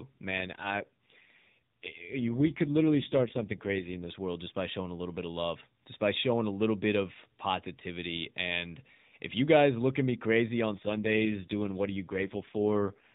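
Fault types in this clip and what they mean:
AMR rate drop: speech grows rough, buzzy and synthetic from 0.3 to 4.1 s, ending before "world just by showing", and again from 10.7 to 13.0 s after "look at me crazy". There is no gap and no band change, which fits a step from 12.2 to 4.75 kbps on a weak link.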